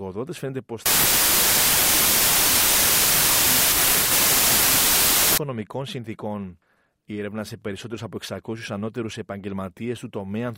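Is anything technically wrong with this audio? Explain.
Yes. From about 0.86 to 5.38 s there's a wrong sample width fault: the bytes get regrouped at the wrong width, which fits 32-bit samples read as packed 24-bit. You hear loud noise with the speech buried underneath, running at 0.75 speed and pitched down.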